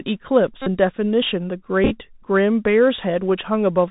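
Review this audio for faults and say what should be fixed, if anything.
The whole clip has been through the Bluetooth CVSD headset codec, and the damage is plainly audible. The sound points to narrowband 64 kbps CVSD, a one-bit delta coder whose step size adapts to the signal. Nothing reaches above 4 kHz. Loud, high-frequency energy outruns the step size and distorts, so sibilants turn scratchy, and a granular hiss sits under the speech. On a spectrogram, a hard ceiling at 4 kHz cuts across the whole file, with a grainy noise floor between syllables. In the waveform, the steep edges look stair-stepped and slew-limited. To prevent it, record over a wideband link such as mSBC or LC3, or use a wired microphone.

Bluetooth headset packet repeats occur at 0.62–0.67 s and at 1.84–1.92 s. When a voice packet is lost, the chip decodes the previous packet's bits again. The first event is a continuous run covering about 45 ms, which fits roughly a dozen lost 3.75 ms packets. 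That run produces a steady buzz near 267 Hz. The second event loses 37.5 ms scattered across about 67.5 ms, in short runs of around 7 ms at most. On a spectrogram, the first event shows a stack of harmonics spaced about 267 Hz apart. In the waveform, a 3.75 ms pattern repeats. To prevent it, keep the headset close to the phone, with a clear line of sight and away from 2.4 GHz interference.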